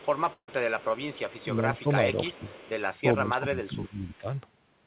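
From 0.00 to 1.46 s, a faint copy of the speech trails it by 360 ms, at about 25 dB below. This is an echo leak. The likely cause is a far-end echo canceller letting loudspeaker pickup through.

Inside that stretch, from 0.33 to 0.49 s, a burst of packet loss removes about 150 ms. The receiver stretches the last sound and fades it. The sound then drops out for about 70 ms before resuming further on.

From 1.75 to 2.55 s, the speech is suppressed in double talk. The level dips by roughly 10 dB over about 0.3 s in total. The likely cause is an echo canceller ducking both talkers at once. Echo leaks back at 1.77 to 1.82 s, about 30 dB down, and at 2.33 to 2.71 s, about 25 dB down.

From 3.14 to 4.27 s, double-talk suppression returns, deeper. It cuts up to roughly 20 dB across about a second, so the speech sinks in pieces. A last echo, about 35 dB down, sits at 4.08 to 4.18 s.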